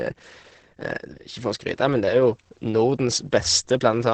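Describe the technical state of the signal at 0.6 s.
At 0.6 s the speech is likely going through Opus compression at a very low rate, one that fits something near 12 kbps. At that rate the encoder has switched to its speech-oriented mode and trimmed the bandwidth to a wideband range topping out near 8 kHz. The result, heard throughout the clip and so at this moment too, is heavily damaged speech that sounds muffled and hoarse, with the upper treble cut away.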